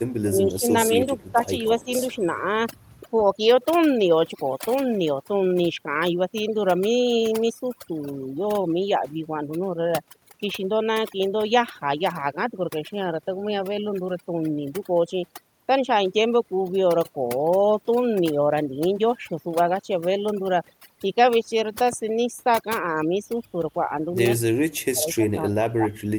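Throughout the clip, overdone noise removal leaves the background nearly silent apart from twinkling specks. Unlike codec artefacts, the damage follows the noise floor: quiet parts of the voice vanish along with the bands nearest the noise estimate.

Speech suppressed in double talk first appears from 0.21 to 0.74 s, where the voice dips by about 20 dB for roughly a third of a second. Shallower dips of a few decibels follow at 0.95–1.12 s, and of about 10 dB at 1.32–1.47 s and 1.78–1.89 s. These are likely caused by an echo canceller turning the talker down while the far side speaks. What sets them apart from noise removal is that whole stretches of voice drop in level, rather than single bands thinning out.

Echo leak brings a faint delayed copy of the voice, about 270 ms behind the original. It runs at 1.07–1.31 s and 1.64–1.84 s, about 25 to 30 dB down, and as a brief scrap at 2.85–2.89 s, about 40 dB down. 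This is likely loudspeaker pickup that the canceller did not fully remove. The fixed delay distinguishes it from room reverberation, which smears the sound continuously rather than repeating it.

From 24.46 s to the end, the speech is suppressed in double talk again, this time far more deeply, by about 35 dB.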